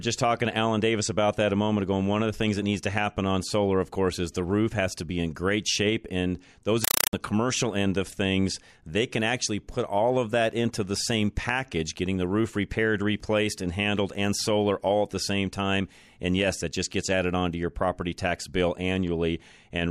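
Compressed stream played as audio at 6.84 to 7.13 s, before "commercial end of things": undecoded AC-3 data is read as samples and heard as loud 4 ms static bursts, 31 per second.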